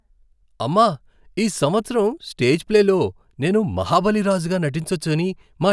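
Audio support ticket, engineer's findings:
Listened to the whole speech recording and nothing turned up that needs chasing, so there's nothing to log against it on our side.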